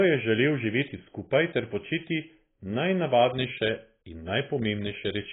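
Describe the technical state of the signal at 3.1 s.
At 3.1 s the speech shows AAC compression damage, which runs through the whole clip. Nothing survives above 3.8 kHz. What remains sounds dull and smeared, with a warbling fizz on sibilants that a clean low-pass filter wouldn't add. This likely comes from heavy AAC-LC quantisation near 16 kbps.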